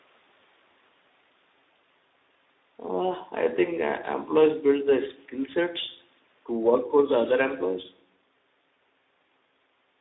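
From start to finish the speech carries plainly audible Speex codec damage, the low-bitrate CELP kind, and the rate it sounds like points to something around 11 kbps. With so few bits left for the excitation, voices come out hoarse and grainy. The line band runs roughly 250 Hz to 3.7 kHz, so it sounds thin and boxy, and the call processing takes out the lowest bass, as it normally does.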